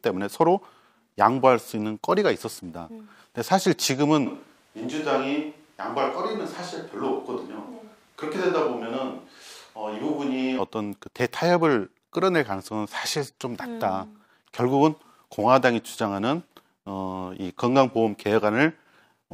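At 4.26 s the speech abruptly turns roomy and hollow, thinner in the bass and roughly 5 dB quieter, with faint room noise, until it snaps back at 10.58 s. A switch to a distant microphone is the likely cause; the sudden jumps both ways distinguish it from gradual reverb.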